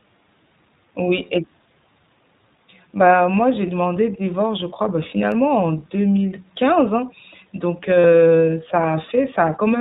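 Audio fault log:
Throughout: iLBC codec. The speech is confined to a narrowband channel with nothing above 4 kHz, so it sounds dull and boxed in. Each 20 ms frame is coded on its own. The result is a plainly audible rough, synthetic grain, which fits a rate of about 15.2 kbps.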